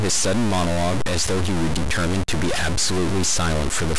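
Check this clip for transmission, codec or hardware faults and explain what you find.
One hardware fault runs through the whole clip: a stuck bit, likely from a broken data line or converter. Because one bit holds a fixed value, roughly half the samples shift by a step near -20 dBFS, so the speech sounds harsh and buzzy. Unlike clipping, which leaves gaps quiet, the pauses fill with noise.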